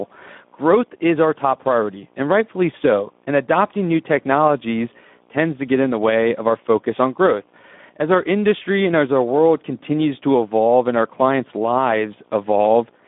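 It's a speech recording with Speex codec damage the whole way through: a hoarse, noisy CELP texture, a phone-like band of about 200 Hz to 3.6 kHz, nothing above 3.8 kHz, and coding roughness that points to a low setting around 11 kbps.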